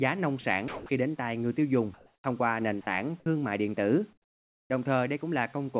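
A voice activity detector that likely misjudged quiet parts of this speech as background twice stopped transmission, so sound dropped by the voice detector is replaced with comfort noise: briefly at 0.41 to 0.44 s, then from 0.68 to 0.89 s, where about 110 ms of actual speech disappears into a flat hiss before the detector reopens and the voice returns. Later, during pauses, the sender likely switched to discontinuous transmission, and the receiver generated comfort noise in place of the background. From 1.94 to 2.24 s the synthetic fill stays within about 1 dB of the real background, which sits about 35 dB below the loudest speech, but its texture is smoother and more uniform. From 4.13 to 4.7 s the fill drops about 19 dB, so the room sound falls to near silence and comes back when speech resumes. Throughout, the call path carries nothing above 4 kHz, which fits a narrowband telephone codec such as G.711.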